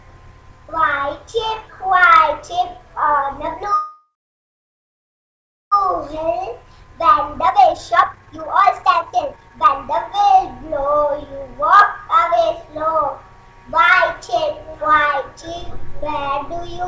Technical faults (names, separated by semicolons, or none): call audio freeze; jitter buffer speed-up